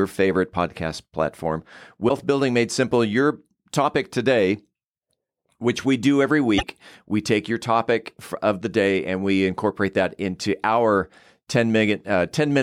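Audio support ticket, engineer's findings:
Damaged data in a compressed stream, speech track. Corrupted bytes in the encoded stream; decoder misreads frames, loses sync, hunts for the next frame header. Audible as short chirp, squawk, click or hole breaking the speech. Events: 2.05–2.11 s (about 54 ms), 6.55–6.64 s (about 96 ms). Probable component: transport or storage layer upstream of the decoder, not the decoder itself. Check stream integrity and any metadata injection into the bitstream.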